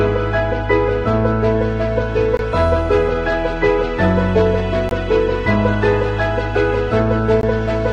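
At 2.37 to 2.39 s, 4.89 to 4.91 s and 7.41 to 7.43 s the sound stops for 20 ms, a gap between chunks each time. The audio was delivered in 2.5 s pieces, and silence was inserted at every join. Unlike a dropout, nothing is missing. The sound resumes exactly where it stopped, so it is only delayed. The hard-edged holes also recur at a steady spacing of about 2.5 s rather than at random.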